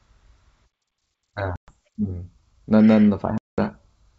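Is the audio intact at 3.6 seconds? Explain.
No. 3.6 s falls just after a 210 ms silent hole from 3.38 to 3.59 s, caused by packet loss on the ADPCM call. The decoder's predictor and step size are still resynchronising at that point.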